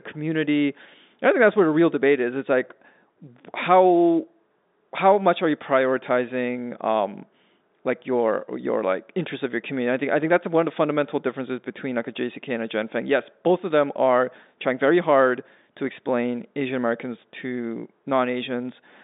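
No technical faults can be heard anywhere in the speech. It carries the narrow sound of G.711 telephone coding, with the band running from about 200 Hz to 3.7 kHz and nothing above 3.8 kHz.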